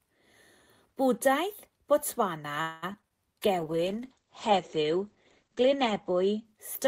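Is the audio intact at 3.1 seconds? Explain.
No. At 3.1 seconds the speech sits inside a pair of short concealed packet losses, at 3.02 to 3.05 s and 3.09 to 3.12 s, each about 20 ms missing. The receiver covered each gap by extending the preceding sound, then crossfaded into the real audio, giving a quick smear or wobble. On a spectrogram each shows as a thin band of smoothed, repeated harmonics or blurred noise. On the waveform it is a briefly too-regular stretch.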